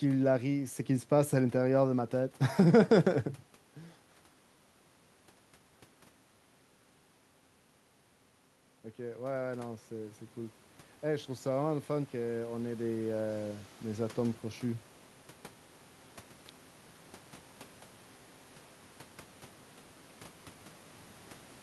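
From 11.04 s to 14.91 s the automatic gain rises: the gain control, judging the input too quiet, raises its gain slowly by about 6 dB, so the voice and the room noise swell together over nearly four seconds. On a waveform the envelope widens steadily across that span, and a spectrogram shows the noise floor brightening along with the speech, unlike the level shifts near 3.5 s and 16.5 s, where only the voice changes as the talker moves.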